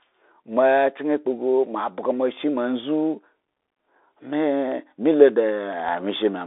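Throughout, the speech carries the sound of a Bluetooth CVSD headset codec. The band is squeezed to roughly 300 Hz to 3.6 kHz, with nothing above 3.8 kHz, and the coding damage is plainly audible. S sounds turn scratchy, loud bright moments break up, and a granular hiss sits under the speech. This fits a 64 kbps one-bit delta coder whose step size can't keep up. Plain low-pass filtering would sound dull but clean, without this grit.

From 4.72 to 6.11 s a train of clicks ticks over the sound, about ten in all at roughly 5.8 per second. The spacing is irregular and the clicks peak about as loud as the speech itself. They are much alike in shape and sit apart from the codec grit, which stays steady, while these come and go as a distinct burst. The likely cause is interference or a struggling interface injecting pulses.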